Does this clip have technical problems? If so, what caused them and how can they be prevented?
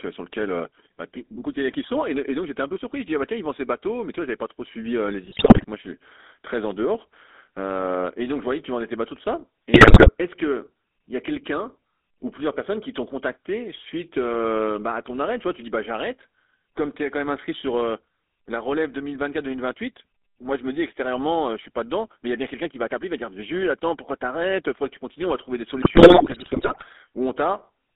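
Yes. The GSM full-rate codec runs throughout the speech: the band stops below 250 Hz and above 3.7 kHz, and the coarse pulse-driven excitation gives a plainly audible buzzy, gravelly roughness, consistent with a 13 kbps GSM encode. Preventing it means capturing or transmitting over a wideband path instead of a GSM voice channel.

GSM bit errors hit at 5.24 to 5.65 s, 9.74 to 10.11 s and 25.82 to 26.84 s. Corrupted filter, pitch and gain values distort the spectrum and level frame by frame, producing squawks, pops and gargling. A stronger radio link or a wired connection would avoid these errors.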